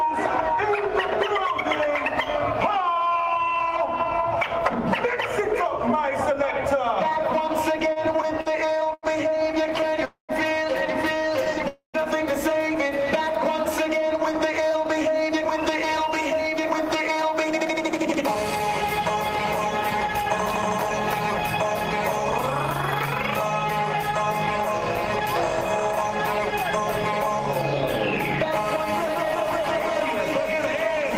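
Repeated stalls (stutter) run from 7.79 to 10.04 s: 22 short gaps totalling 377 ms, the longest 89 ms, fill about 17% of that stretch. Packets arrived late or too slowly, the jitter buffer kept running dry, and the receiver stretched the last sound each time, so the audio drags and stutters with nothing lost.

A call audio freeze follows at 10.05 to 10.32 s. The sound is held for 239 ms, the second half of it, 120 ms, dying into silence, before the audio resumes where it stopped. The likely cause is held-up packets emptying the jitter buffer, which adds 239 ms of delay.

A second, shorter stutter at 11.45 to 11.63 s has 3 gaps of at most 10 ms, 28 ms in all, about 16% of the span. Another freeze comes straight after at 11.68 to 11.97 s: 258 ms held, the last 130 ms silent, adding 258 ms of delay.

Jitter buffer speed-up follows from 14.28 to 22.00 s at 104% speed, trimming about 0.3 s, and again from 23.32 to 27.29 s at 102%, trimming about 70 ms. 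The buffer had built up surplus delay, so the receiver cut many short pitch-period pieces. The audio runs faster at unchanged pitch.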